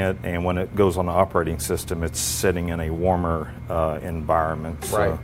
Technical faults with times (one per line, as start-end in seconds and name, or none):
none